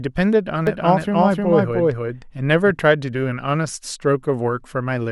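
A speech recording with a doubled audio track from 0.67 to 2.71 s: a second, full-band copy of the speech runs roughly 300 ms behind, at about the same level, with no reverberant tail, cutting in and out abruptly. On a waveform the envelope shows each syllable repeated a third of a second later; a spectrogram shows duplicated harmonic patterns offset in time. The likely cause is the audio being captured twice through a slower second path.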